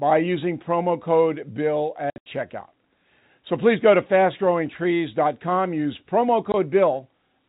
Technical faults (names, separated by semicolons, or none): packet loss filled with silence